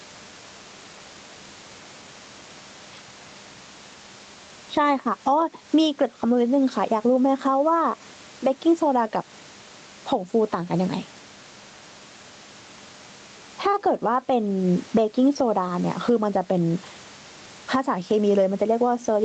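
Gain pumping throughout: gain swings by roughly 10 dB, pulling loud and soft parts closer in level and squashing the sound rather than gating to silence, likely excessive gain into fast limiting.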